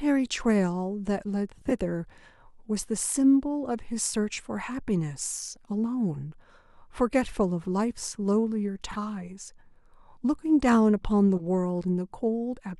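Speech, with corrupt frame decoded bursts at 1.56–1.72 s (the loudest), 7.61–7.66 s, 8.91–8.96 s and 11.36–11.42 s. Damaged compressed frames were played anyway, giving brief chirps and noise.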